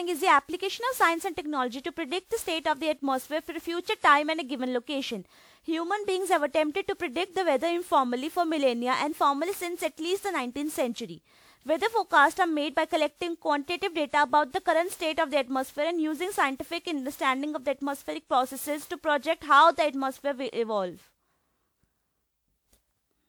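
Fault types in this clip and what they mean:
Generation loss: the speech was likely decoded and re-encoded around ten times through a WMA-style lossy codec, leaving swirly, hollow smearing and blurred consonant onsets.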